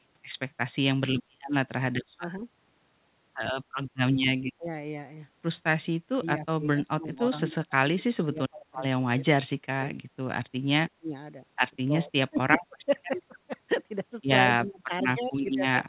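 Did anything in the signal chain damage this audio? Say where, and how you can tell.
Yes, in the call processing. Speech suppressed in double talk appears at 2.17–2.46, 4.58–4.70, 6.20–9.26, 9.62–9.96, 10.96–11.13, 11.73–13.38 and 14.46–15.87 s. The voice sinks or breaks up in pieces, by about 15 to 30 dB at the deepest, with roughly 2 s lost in the 6.20–9.26 s stretch. The likely cause is an echo canceller mistaking overlapping far-end talk for echo and clamping down on the near talker too.

An echo leak shows at 15.46–15.50 s as a faint delayed copy of the speech, trailing by about 134 ms and sitting about 30 dB below the voice. The far side's echo canceller likely let through a fragment of what its microphone picked up from the loudspeaker, and that residue travelled back down the line. The band stops at 4 kHz throughout, which fits a G.711 mu-law call path.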